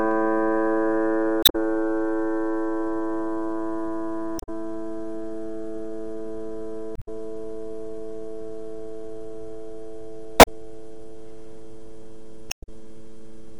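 A recording of sounds with damaged data in a compressed stream: brief glitches at 1.40–1.56, 4.36–4.49, 6.93–7.08, 10.39–10.48 and 12.48–12.69 s, where the decoder misreads corrupted frames and resynchronises.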